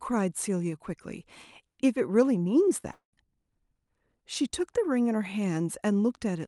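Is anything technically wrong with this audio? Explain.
Yes. Around the 3-second mark the speech breaks up twice, once briefly and once for a longer stretch.

From 2.80 to 2.87 s, with a second hit at 2.83 to 2.85 s, there is a quick smear. This is short concealed packet loss: each gap of about 10 ms was bridged by extending the preceding sound before blending back. A little of the audio is also dropped here, so the timing closes up slightly.

From 2.92 to 3.14 s, the sound trails off into a fading buzz for about 200 ms, ending in a short silence, before the speech resumes with part of it missing. This is likely a long network dropout, with the receiver stretching the last sound until nothing remained to conceal. The call path underneath is Opus with its band limited to 12 kHz.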